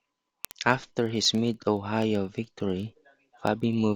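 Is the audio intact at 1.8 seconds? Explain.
No. At 1.8 seconds the speech sits inside a run of word clock ticks lasting from 0.12 s to the end of the clip. The receiving device is running on its own clock rather than locking to the sender's, and the two drift apart by roughly 700 parts per million. Each time they slip past each other a single sample is dropped or repeated, about every 30 milliseconds, producing a steady stream of sharp ticks of uneven strength, around a hundred in all.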